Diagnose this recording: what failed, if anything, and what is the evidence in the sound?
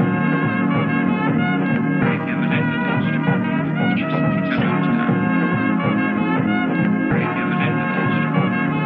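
Nothing failed that I can hear: the music runs its whole course without any fault at any stage.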